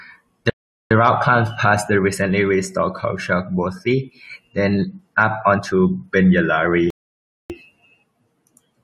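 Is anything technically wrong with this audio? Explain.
Yes, there are two rebuffering stalls in this speech clip. The first runs from about 0.50 to 0.91 s and the second from 6.90 to 7.50 s. In each, the player drained its stock of downloaded audio and simply waited for more to arrive. You get a dead-silent gap of roughly 0.41 s, then 0.60 s, and the speech picks up exactly where it stopped. Nothing's missing, but the pauses stretch the timing unnaturally.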